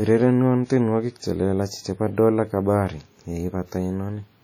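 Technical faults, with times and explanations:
Throughout, WMA compression: the speech rings and smears, with a washy, swirling haze around each sound and a hiss that swells and fades along with the voice rather than sitting steady underneath it. The damage is heavy. This is likely a transform codec working with long blocks, spreading its quantisation noise over tens of milliseconds and discarding weaker spectral detail outright, which fits a low bitrate of around 32 kbps.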